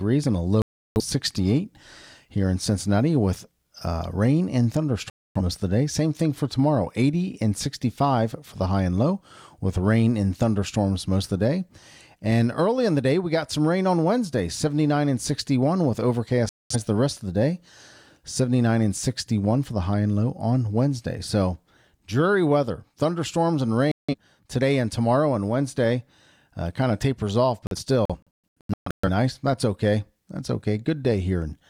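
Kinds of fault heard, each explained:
Digital broadcast dropout: The receiver lost valid frames and muted, so that audio is gone. The speech cuts to silence at 0.62, 5.10, 16.49, 23.92 and 27.67 s. The last dropout, after "kind of tapers off", breaks into short holes across 1.4 s.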